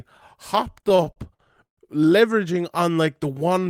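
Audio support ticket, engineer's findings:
Repeated stalls (stutter), 0.67–1.80 s: ten gaps that drag and stutter, longest 134 ms, roughly 320 ms concealed, about 28% of the span. Jitter buffer running dry as packets arrive late; receiver extends the last sound, fading the longer waits. Nothing lost.

Jitter buffer slow-down, 3.05–3.60 s: speech drawn out at unchanged pitch, running at 93% speed, 45 ms added. Receiver repeating single pitch periods and bits of pauses to rebuild buffer reserve.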